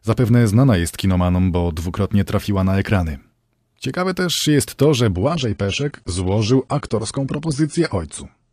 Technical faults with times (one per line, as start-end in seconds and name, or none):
5.13-8.52 adaptive stream at a lower bitrate